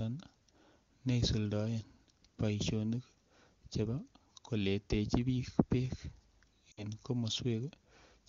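At 6.71 to 6.83 s there's a short run of lost AMR speech frames, about 60 ms, which fits three dropped 20 ms frames. The decoder stretches the last good sound with falling gain, so it smears and fades quickly, as wideband AMR-WB concealment does, before the speech returns.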